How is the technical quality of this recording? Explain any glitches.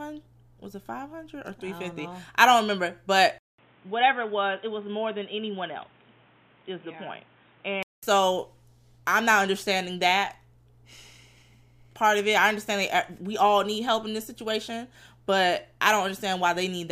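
One fault stands out. From 3.38 to 8.03 s the speech turns dull and boxy, consistent with the input switched to a poorer device, likely a fallback microphone or headset call profile. That path passes nothing above 3.8 kHz, sits a few decibels quieter, and brings its own background noise roughly 30 dB below the speech. A 200 ms gap marks the changeover. On a spectrogram the upper band goes abruptly empty for that stretch, and the waveform shows the dropout and a smaller envelope.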